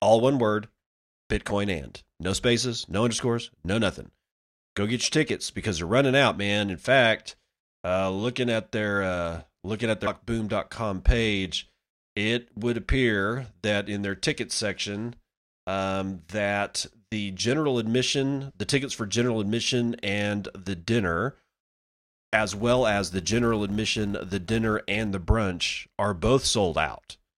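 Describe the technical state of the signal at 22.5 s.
At 22.5 s the speech sits inside a stretch of filter restarted on every block, running from about 22.34 s to 25.08 s. The filter drops its stored state at each block boundary and starts again from silence, so every block opens with a small transient. This is heard as a buzz at 172 Hz that rises and falls with the speech level, which fits a 256-sample block. A waveform shows evenly spaced small spikes, and a spectrogram shows a harmonic comb based on 172 Hz.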